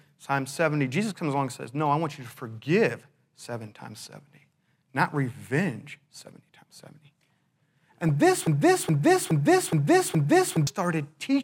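DAB burbling hits at 8.04 to 8.09 s. With weak reception, a bit error rate of around a fifth of a percent slipped past error correction into the MP2 data, so a few frames carry corrupted samples and scale factors, throwing individual sub-bands out of level in a brief burst of noisy blips over the speech.

A broken-record loop follows from 8.47 to 10.67 s. A 0.42 s fragment repeats back to back five times, exactly identical each pass, and the speech that belonged in that stretch never plays. The likely cause is a player, encoder or stream stalling and re-sending its last held fragment.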